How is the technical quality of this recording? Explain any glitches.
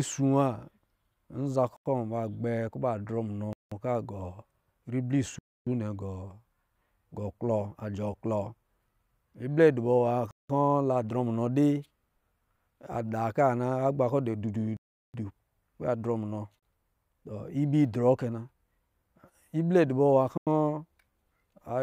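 The recording is marred by seven blocks of digital silence, where the audio drops out to silence and cuts back in with no fade. They fall at 1.77 s (about 93 ms), 3.53 s (186 ms), 5.39 s (279 ms), 10.31 s (186 ms), 14.77 s (372 ms), 16.59 s (34 ms, just after "drɔ munɔ") and 20.38 s (93 ms). Most lengths are whole multiples of about 93 ms, which fits an output buffer of 4,096 samples going unfilled, sometimes several in a row. The shortest dropout is a brief gap, and the rest are audible holes in the speech.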